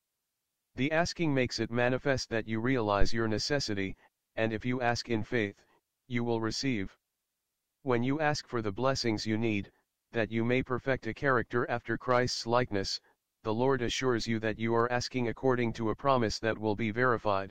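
At 3.01 s a phantom power thump appears. Supply voltage was switched on or off on a live input, and the step pushed through the coupling capacitors. A deep thump peaks near -13 dBFS and dies away over about 54 ms, ending by 3.26 s.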